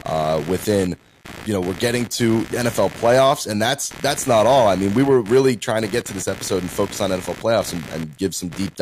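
From start to finish the speech carries computer activity noise: a buzzy, pulsing scratch repeating at something like 70 times a second, sitting roughly 20 dB below the speech. Its rhythm and intensity follow processor, graphics or mouse load rather than anything in the speech itself. That load varies the current in a ground shared with the audio circuit, and the fluctuation enters the signal as this chirping, buzzing interference.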